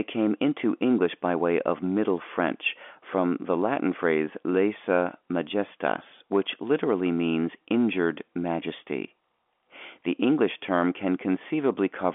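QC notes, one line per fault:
The speech sits in a G.711 mu-law telephone channel at 64 kbps, with its content confined to the 250 Hz to 3.5 kHz line band and nothing above 3.7 kHz, and no faults are present.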